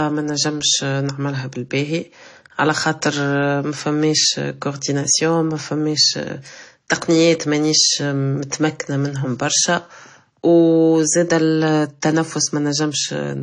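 Transcoding between lossy codecs runs through the whole speech clip, from start to finish. Nothing is present above 10 kHz, and the sound carries two layers of damage at once: the artefacts of each codec heard together. That mix is likely the result of one low-bitrate encode being re-encoded by a second codec. The combination fits an MP3 pass near 40 kbit/s followed by AAC-LC near 32 kbit/s, with the second stage wasting bits on the first stage's artefacts.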